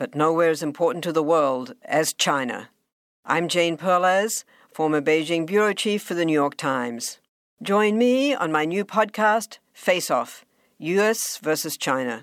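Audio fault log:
No faults heard anywhere in this speech recording.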